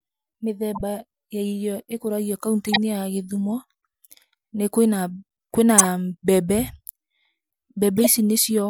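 At 0.74 to 0.81, 2.66 to 2.78, 5.78 to 5.88 and 7.97 to 8.07 seconds you get a corrupt frame decoded: damaged compressed frames played anyway, spraying energy into wrong bands for a few frames. Short chirpy bursts, the first fairly soft, the middle two much louder.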